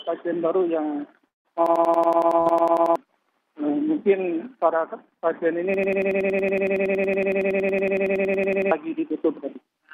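Long network dropout at 1.27 to 1.48 s: the sound trails off into a fading continuation and about 0.17 s of silence, then resumes with about 180 ms missing, likely from a stalled network stream.

System hang loop from 1.66 to 2.96 s: a frozen system left the hardware cycling one 93 ms piece of audio 14 times. This creates a machine-gun stutter at 10.8 Hz, which fits a 4096-sample buffer. Roughly one and a half seconds of audio is lost.

Burst of packet loss at 2.41 to 2.49 s: 60 ms of packets were lost, and the receiver covered the gap with about 50 ms of concealment that fades away before playback jumps ahead.

System hang loop again from 5.74 to 8.71 s: the same 93 ms buffer repeats 32 times at 10.8 Hz, replacing roughly three seconds of audio.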